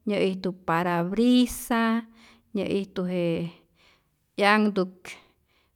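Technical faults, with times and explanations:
No technical faults detected.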